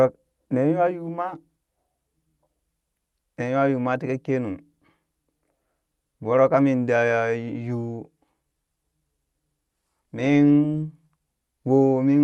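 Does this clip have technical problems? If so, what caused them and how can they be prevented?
No, nothing stood out on listening to this speech, which comes through a call codec path whose top end stops around 12 kHz, consistent with Opus at about 32 kbps.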